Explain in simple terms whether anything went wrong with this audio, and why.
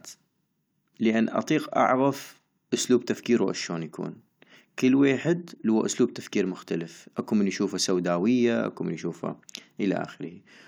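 Listening carefully to the speech, nothing stood out as having gone wrong with the recording.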